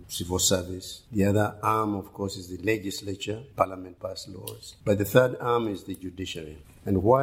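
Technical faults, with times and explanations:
No technical faults can be heard in this recording.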